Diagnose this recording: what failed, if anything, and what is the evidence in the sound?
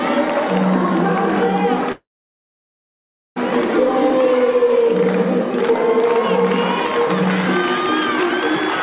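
A call audio freeze runs from 1.92 to 3.38 s, at the network and jitter-buffer stage. The sound stops being fresh and the last moment is carried on briefly before dropping to silence for about 1.33 s. It then resumes exactly where it left off, so nothing is lost but the clip is pushed about 1.44 s later. The likely cause is packets stalling in transit until the buffer ran dry. The G.711 band limit at 4 kHz is audible throughout.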